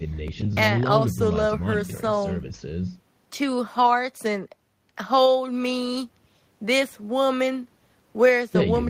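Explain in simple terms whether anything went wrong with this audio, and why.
Nothing went wrong here: the speech comes across without any dropouts, glitches or other technical hiccups along the way.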